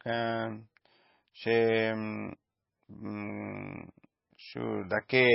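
Speech with heavy MP3 compression throughout: nothing above 5.6 kHz, with watery, swirling artefacts, likely from a very low bitrate, around 17 kbps.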